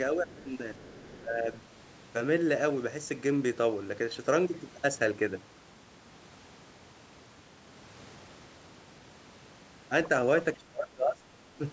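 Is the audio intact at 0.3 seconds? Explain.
No. Around 0.3 s, two faults overlap. The first is speech suppressed in double talk, between 0.15 and 0.38 s. The speech level dips briefly, by roughly 5 dB at its deepest, across about a tenth of a second in total. The likely cause is both sides talking at once. The echo canceller could not tell the local talker from the loudspeaker echo, so it pulled both down together.

The second fault is the other side's voice leaking through, from 0.27 to 0.44 s. A faint second voice sits under the speech, roughly 25 dB quieter. It is brief. This is likely loudspeaker playback picked up by the microphone that the echo canceller did not fully remove. Both faults fall within the same band-limited call audio, with nothing above 8 kHz.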